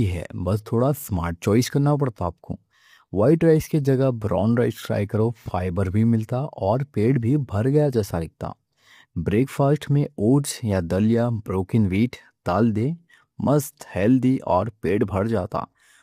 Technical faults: low-delay AAC compression

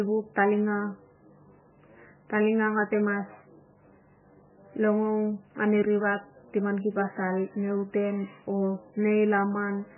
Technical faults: MP3 compression

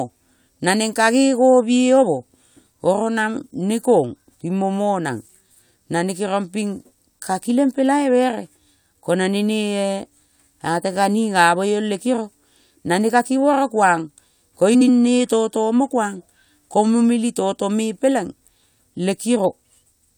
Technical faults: frames out of order

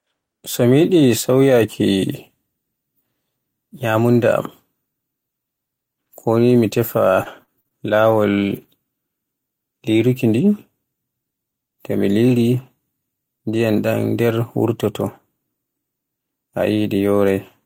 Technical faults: repeated packet loss (robotic sound); lost packet rebuilt from error correction

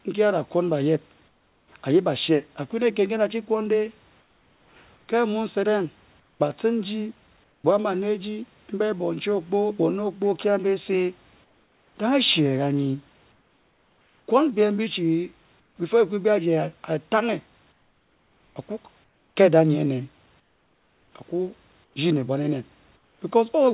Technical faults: comfort noise in place of the background

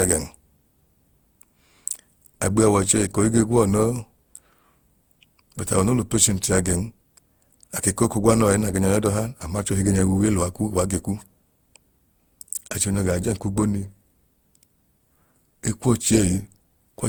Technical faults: generation loss

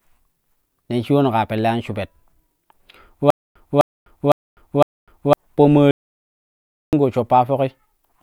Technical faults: stutter with silent gaps; audio dropout to silence

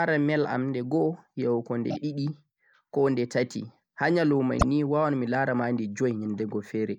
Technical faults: repeated frames

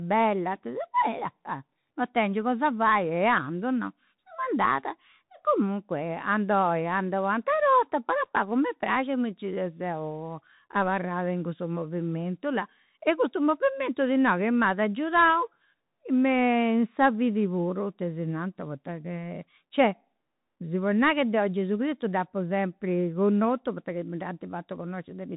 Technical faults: Bluetooth CVSD headset codec

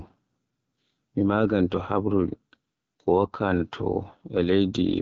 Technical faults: AMR wideband (HD Voice) codec

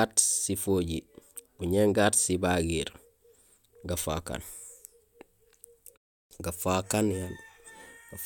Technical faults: clipped start after a pause

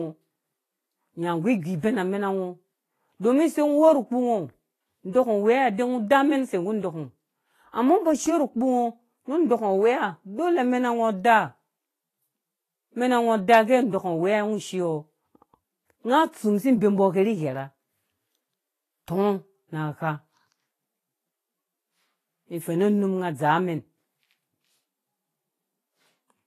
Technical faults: Vorbis compression; pre-echo

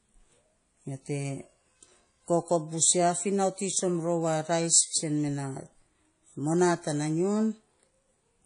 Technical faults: WMA compression

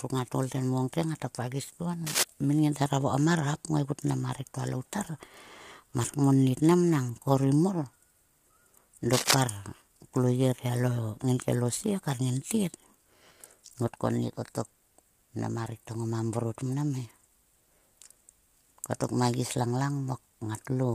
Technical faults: low-delay AAC compression; cable scratch noise

